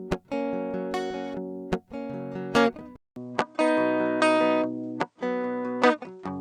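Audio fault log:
2.96 s to 6.40 s, input switched to a poorer device: after a 200 ms gap, the music loses everything above 9 kHz, shifts in level by about 5 dB and gains a faint new noise floor, likely from recording switching to a narrower-band input device.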